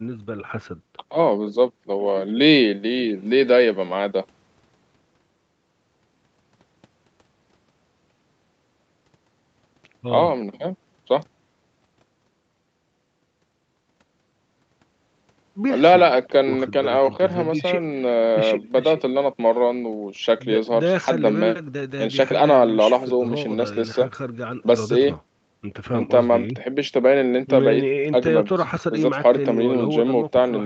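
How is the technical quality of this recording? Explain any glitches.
Nothing goes wrong anywhere in this speech recording.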